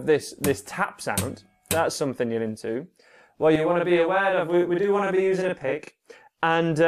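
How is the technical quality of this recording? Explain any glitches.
There's one real glitch to flag. From 3.56 to 6.00 s you get a channel delay (doubling): one side runs 40 ms late, and when the two get folded to mono that lagging copy sits right behind the original at equal level, so everything sounds doubled, almost like a tight slapback.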